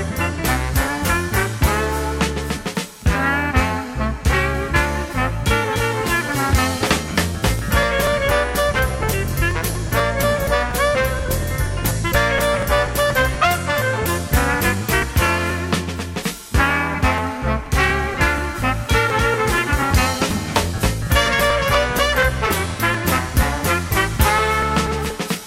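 Periodic USB or driver dropouts run from 6.87 s to 25.35 s, recurring every 0.24 s. Each time the bus or driver stalls, about 10 ms of audio is skipped outright, so around seventy evenly spaced ticks cut into the sound.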